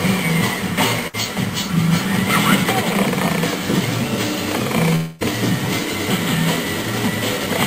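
At 1.07 s a burst of packet loss begins and runs to 1.15 s. A short run of audio never reached the player in time. The receiver fills the hole by stretching the last sound for about 60 ms. That fill fades as it goes, giving a brief held buzz or hiss. Playback then resumes. About 60 ms of the original sound is skipped, so the join jumps ahead.

From 4.95 s to 5.23 s the sound breaks again, for much longer. A stretched, fading tail carries on for about 250 ms. It lasts the whole gap and never drops to silence. When the audio returns, about 240 ms of it is gone. The likely cause is a long network dropout, with nothing arriving for over a quarter of a second.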